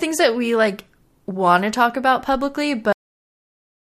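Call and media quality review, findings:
Cut-off end at 2.93 s. Speech stops abruptly mid-sound and drops straight to digital silence, with no decay, through 3.94 s. Probable component: capture or playback buffer handling at stream close. Final buffers were never written, truncating the last second.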